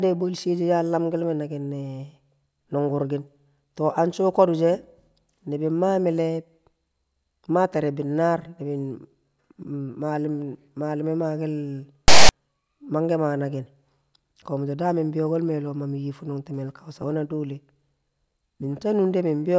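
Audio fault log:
12.08–12.29 s, file tags played as audio: a block of text tags is read as if it were samples, so for about 0.21 s the speech gives way to a loud rasp pushed off to one side of zero, starting and stopping with hard edges.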